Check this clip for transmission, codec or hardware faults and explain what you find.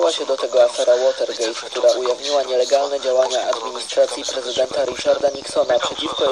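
One fault is present. From 4.57 to 6.28 s there is a train of clicks: about thirty near-identical pops at a regular 14.1 per second, peaking a few dB above the sound. The likely cause is interference or a struggling interface injecting pulses. They show as evenly spaced vertical broadband lines on a spectrogram and sharp spikes on the waveform.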